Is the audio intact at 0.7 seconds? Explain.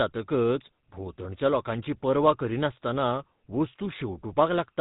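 No. At 0.7 seconds, as everywhere in this speech clip, the GSM full-rate codec is at work. It models the vocal tract and drives it with a sparse, regularly spaced pulse excitation, which gives voices a plainly audible buzzy, gravelly roughness consistent with a 13 kbps speech coder. On a spectrogram, everything above 3.8 kHz is empty, a flat ceiling across the whole clip, and the harmonics below it look coarse and smeared.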